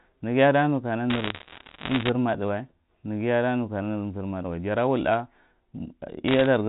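A burst of sharp ticks and crackle runs over the speech from 1.1 to 2.09 s, and a shorter patch returns from 6.28 to 6.46 s. These are bit errors on a digital phone line. On the G.711 mu-law link, flipped bits each corrupt a single sample. Hits on the upper bits, or on the sign of a loud sample, throw that sample far off and produce a click. At an error rate of one or two percent in the first stretch and about one percent in the second, the clicks crowd into crackle.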